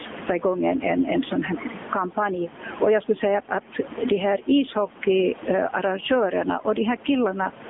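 Throughout the recording, overdone noise removal cuts individual frequency bands whenever they drop near the estimated noise floor. The background becomes near silence with twinkling specks. Over the whole clip the gain swings by around 15 dB, likely gain pumping from gain set too high ahead of a fast limiter. The AMR narrowband mobile codec confines the speech to a 200 Hz to 3.5 kHz line band with nothing above 3.7 kHz. Its coding damage is plainly audible as a buzzy, synthetic edge, which fits a bitrate near 8 kbps. Beneath this sits the room noise, about 29 dB below the speech.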